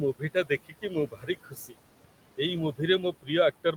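The background noise drops away between phrases and swells back under the talking. These are noise suppressor artifacts: the suppressor pulls bands it judges to be steady noise down by about 18 dB, frame by frame, against room noise about 14 dB below the speech.

From 0.14 to 0.5 s, and again from 0.66 to 1.77 s, parts of the speech sound swallowed and faint. Roughly a sixth of a second is affected in the first stretch and most of the second. This is speech cut by the noise suppressor: it mistook soft speech energy for noise and turned it down by up to about 18 dB.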